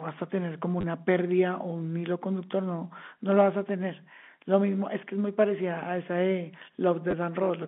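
At 0.81 s and again at 7.11 s, packets went missing and the receiver filled the gaps, about 30 ms and then 20 ms, by replaying the last packet, which fits 10 ms packets. Each run of replays gives a brief robotic stutter.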